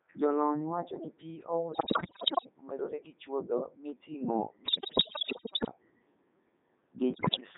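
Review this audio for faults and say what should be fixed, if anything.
The whole speech clip runs through a Codec 2 vocoder: robotic, buzzy, band-limited to 200 Hz to 3.7 kHz, consistent with its top 3.2 kbit/s mode rebuilding the voice from sine waves. Use a waveform codec or a higher-rate link if the channel allows.

Bit errors on digital voice radio hit at 1.72–2.49 s, 4.66–5.71 s and 7.14–7.40 s. Corrupted frame parameters, around a fifth of bits flipped, make pitch and level jump into warbly gibberish. Better coverage, stronger error protection, or muting bad frames would help.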